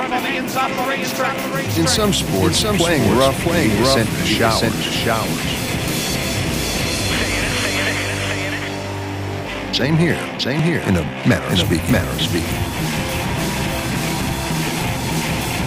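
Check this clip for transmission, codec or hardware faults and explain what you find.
Two faults are audible.

A doubled audio track runs throughout: a second, full-band copy follows roughly 0.7 s behind at about the same level, likely from a second capture path or a misaligned edit. It has no decay or room colour, so every sound returns as a clean, distinct repeat.

Periodic USB or driver dropouts occur from 10.59 s to 14.68 s. A blocked bus or driver skips roughly 10 ms of audio every 0.24 s, about twenty times, producing evenly spaced ticks heard wherever signal is present.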